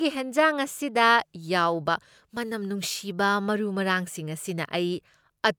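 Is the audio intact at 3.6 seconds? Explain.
Yes, the speech at 3.6 seconds plays through intact, with no audible fault at that moment.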